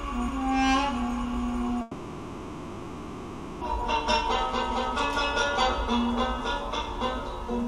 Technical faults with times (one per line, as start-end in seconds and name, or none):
1.81-3.64 long network dropout